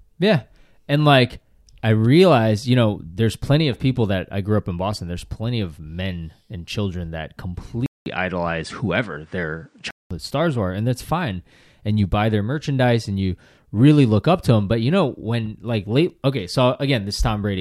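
From 7.86 to 10.11 s the speech turns duller, likely because the input switched to a poorer device. A 200 ms silence marks the switch as a waveform gap, the spectrogram goes empty above 9.8 kHz, and the level shifts by around 5 dB.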